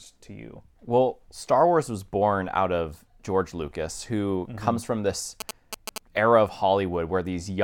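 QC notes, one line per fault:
5.40–5.98 s, GSM signalling bursts: galloping ticks and 217 Hz buzzes, only a little below the speech, as the circuit rectifies a nearby phone's radio bursts; gated clusters, unlike steady mains hum.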